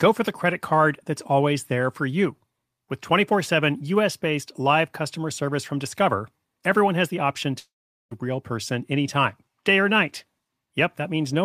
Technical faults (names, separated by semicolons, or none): long network dropout